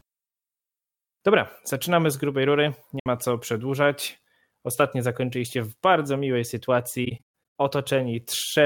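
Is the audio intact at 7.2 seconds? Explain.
No. The audio at 7.2 seconds falls inside a stretch of AAC frame loss with muting, from 7.05 to 7.24 s. Several frames go missing, and the longest run of silence lasts roughly 150 ms. The decoder zeroes the spectrum for each lost frame. Because AAC frames overlap, the sound fades out and back in rather than cutting off sharply. The speech drops into soft-edged holes.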